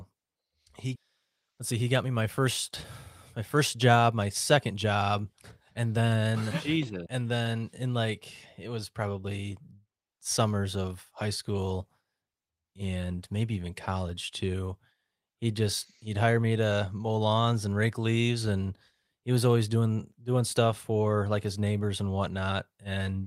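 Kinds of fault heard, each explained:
Skip ahead: At 0.95 s the speech jumps forward. About a second of audio was dropped, probably as the jitter buffer overflowed with later audio already queued. Nothing fills the join. The two sides meet almost directly.
Jitter buffer speed-up: The buffer held more audio than it targets. It trimmed tiny pitch-period slices repeatedly to cut delay. From 1.51 to 2.04 s, just before "me my first", speech runs 8% fast. From 3.38 to 5.03 s it runs 10% fast. Pitch stays unchanged, and it sounds hurried.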